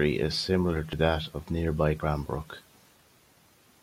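Speech that lurches forward at 0.93 s, as roughly 70 ms of audio goes missing: compressed frames skipped, dropped or rejected by the decoder.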